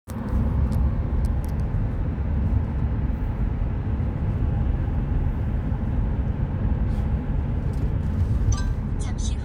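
No faults detected anywhere in the audio; nothing to report.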